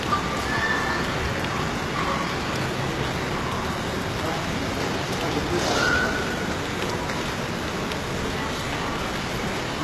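Throughout, the treble of these everyday sounds is bright yet gritty and metallic, and nothing reaches above 12.3 kHz. That is likely HE-AAC compression, at a rate that sounds like about 16 kbps. Lower bands are copied upward into the treble, so unlike a plain low-pass, the top keeps its sheen but loses its true detail.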